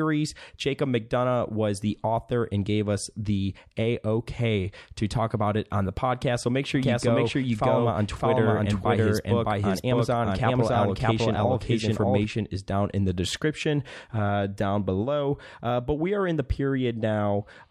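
A doubled audio track, likely from double capture, runs 6.75 to 12.25 s: an equally loud, dry copy trails about 0.7 s behind.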